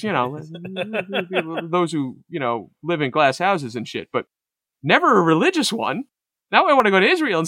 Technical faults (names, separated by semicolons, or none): dropped buffer (overrun)